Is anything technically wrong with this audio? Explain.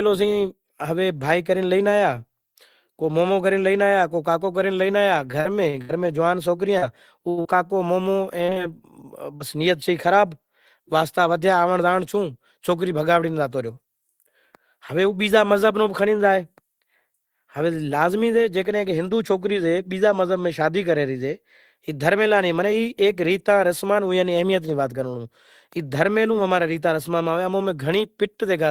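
Yes, two faults can be heard in this speech clip.

From 5.31 to 9.43 s there is repeated packet loss, producing a robotic sound. Short holes keep opening, the longest about 75 ms, and each is patched by extending the sound just before it. About a tenth of the stretch is filled this way, and some material is simply lost. The result is choppy and robotic. Unlike a single dropout, the holes recur in quick succession, so the whole passage takes on a mechanical texture rather than one isolated click or gap.

From 11.22 to 11.83 s there is a jitter buffer speed-up. The receiver had built up more delay than it wanted, so it trimmed tiny pieces of roughly one or a few pitch periods, many times in a row, about 40 ms in total. The speech runs about 5 percent fast and sounds slightly hurried. What separates this from a pitch shift or a resampling error is that the pitch stays the same. Unlike packet loss, nothing audibly drops out or turns metallic. 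The timing simply tightens.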